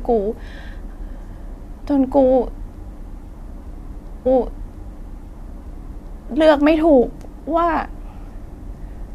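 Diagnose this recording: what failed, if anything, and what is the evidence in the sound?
A stream segment repeated at the playback stage. From 4.25 s to 6.25 s, about 2.0 s of speech replays, with a small blip at the jump back. The player fetched or queued the same segment twice.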